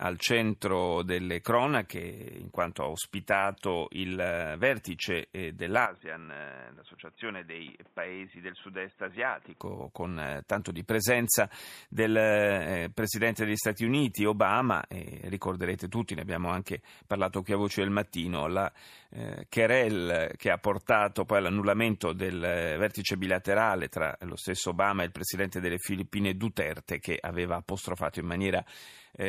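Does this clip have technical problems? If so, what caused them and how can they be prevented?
Yes. Input switched to a poorer device, 5.86 to 9.60 s: the audio turns dull and about 5 dB quieter with nothing above 3.8 kHz, likely a switch to a narrowband microphone. Preventing it means locking the recording input to one device and disabling automatic switching to headsets or call profiles.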